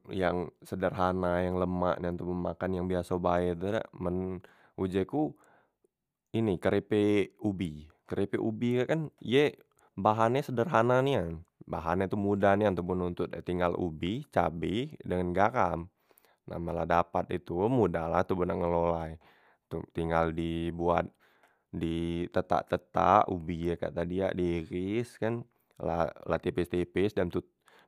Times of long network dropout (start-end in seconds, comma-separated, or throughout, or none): none